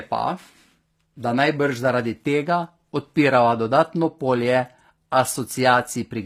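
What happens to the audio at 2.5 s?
At 2.5 s the speech is passing through what is likely HE-AAC compression, and this holds for the whole clip rather than starting there. The codec has coded only the lower band properly and regenerated the treble by copying lower bands upward under a coarse envelope, which fits a low bitrate around 24 kbps. The top end stays bright but is not the original, so harmonics fail to line up across the crossover and s sounds come out plainly gritty, metallic or lispy.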